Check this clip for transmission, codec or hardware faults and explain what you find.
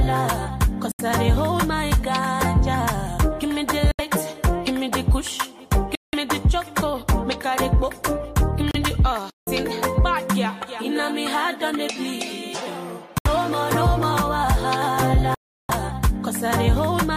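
Six brief dropouts to silence occur at 0.92 to 1.01 s, 3.91 to 4.01 s, 5.95 to 6.15 s, 8.71 to 8.76 s, 13.18 to 13.27 s and 15.35 to 15.71 s. The silent gaps last 75 ms, 75 ms, 179 ms, 33 ms, 73 ms and 347 ms. The sound cuts out abruptly, then returns. This is likely a Bluetooth stall, where the wireless buffer ran empty while delayed packets were resent.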